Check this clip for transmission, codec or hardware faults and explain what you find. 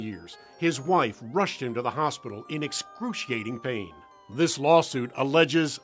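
No faults can be heard: the audio shows only the normal signs of call microphone processing, with the lowest bass removed by its high-pass filter and nothing above 8 kHz.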